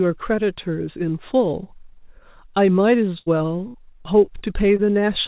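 Burst of packet loss hits this speech clip at 3.18 to 3.28 s and again at 3.68 to 3.76 s. Each time the receiver keeps extending the last sound for about 82 ms and then 65 ms, letting it fade as a held buzz or thinning hiss. The speech then picks up further along, with roughly 80 ms and 60 ms of the original simply gone. Short concealed packet loss follows at 3.38 to 3.42, 4.26 to 4.29, 4.39 to 4.43 and 4.77 to 4.80 s, where about 20 ms each never arrived in time. The decoder patches each hole with 13 to 18 ms of continued pitch or shaped noise before blending back, so these are heard as brief smears or wobbles, and a short consonant can drop out. Underneath, the narrowband call sound with nothing above 4 kHz fits a G.711 mu-law path at 64 kbps.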